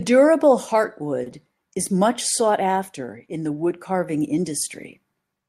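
Speech with a short stall from a late packet at 1.23 to 1.28 s, just before "is much sought after": the jitter buffer ran dry, so the receiver held the last sound for 30 ms, with a slight buzz or dip, then resumed with nothing lost but 30 ms later.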